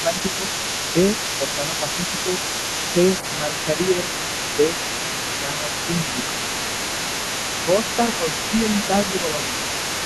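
An echo canceller on the talker's end has likely failed to subtract the loudspeaker signal from the microphone, so this speech recording carries the other side's voice leaking through from start to finish, about 10 dB below the main talker. It comes through as a secondary voice underneath. Whenever both sides speak at once, the same canceller likely misreads the talker as echo and turns everything down, giving speech suppressed in double talk from 0.03 to 2.36 s, 2.93 to 4.76 s, 5.41 to 6.18 s and 7.66 to 9.58 s. Within each stretch the talker's level dips in short pieces, by roughly 5 dB at the deepest. The dips add up to a fraction of a second per stretch, most in the first and least in the third.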